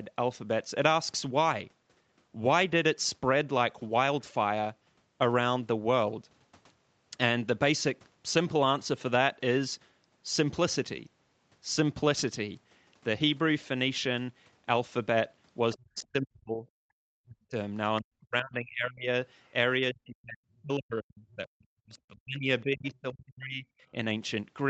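An echo canceller that likely failed to fully cancel loudspeaker pickup lets the other side's voice leak through at 15.73 to 15.77 s, about 25 dB below the speech, and again at 19.46 to 19.51 s, about 40 dB down. Each is a brief, faint scrap of a second voice.

When both sides talk at once, the canceller likely cannot separate the talker from the echo, so speech is suppressed in double talk at 15.75 to 16.66 s, 17.08 to 17.55 s, 18.01 to 19.08 s and 19.80 to 23.65 s. The voice dips by up to about 40 dB. The last stretch is the longest, with roughly three seconds affected.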